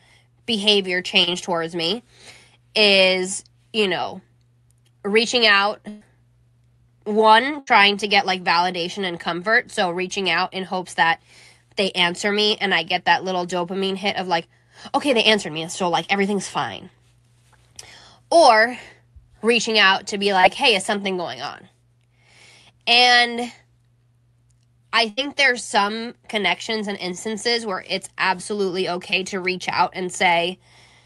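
At 1.23 to 1.29 s, just before "towards me", a short concealed packet loss covers about 40 ms of missing audio with a continuation of the last sound, heard as a brief smear. At 5.89 to 6.03 s, after "reaching out", a burst of packet loss drops about 120 ms. The last sound is continued and turned down as the gap goes on, then the audio resumes further on, so a piece is skipped rather than smeared. The same burst pattern recurs at 7.59 to 7.69 s and 25.09 to 25.19 s, each losing about 80 ms. Short concealed losses of about 20 ms return at 20.41 to 20.45 s, between "reaching out to be" and "hey is something going", and at 28.37 to 28.41 s and 29.11 to 29.14 s, as brief smears or wobbles. Throughout, the Opus call path limits the top end to about 12 kHz.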